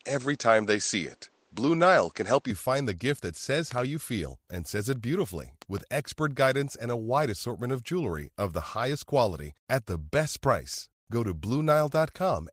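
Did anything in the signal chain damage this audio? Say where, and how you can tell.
Yes. For the first 2.51 s, up to "you find", the speech sounds duller and boxier. Nothing comes through above 8.3 kHz, the level sits about 5 dB off, and there is a distinct noise floor roughly 45 dB below the signal. Then the sound opens up with no gap. This points to the input switched to a poorer device at the driver or device-selection stage, likely a narrower-band microphone or headset profile, with its own response and noise before the normal input took over.

Two bursts of loud pop sit on top of the speech, each a quick double pop peaking roughly 10 dB above the signal. The first runs 3.71–3.80 s, between "gift that says" and "you feel and says". The second runs 5.62–5.80 s, after "and says it beautifully" and before "expert guidance and". The speech carries on underneath both, which fits an added voltage step or pulse in the analogue wiring, likely from a switch, plug contact or static discharge, shaped into brief thumps by the following circuitry.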